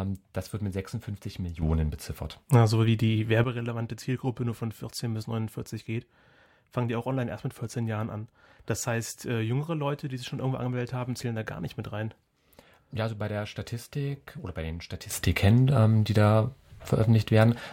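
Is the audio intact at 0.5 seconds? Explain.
Yes, the audio is intact at 0.5 seconds, with no dropout, click, distortion or other fault audible at that point in the speech.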